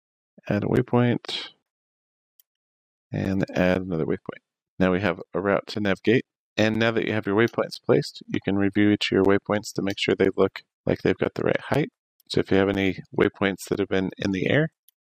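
From about 0.26 s right through to 14.75 s there's a steady tick every half second, around thirty of them. These are periodic USB or driver dropouts: something in the background keeps stalling the bus or the audio driver on a fixed schedule, and each time roughly 10 ms of audio goes missing and gets filled with silence. Because the gaps land with the signal running, you hear them as those evenly spaced little clicks or pops.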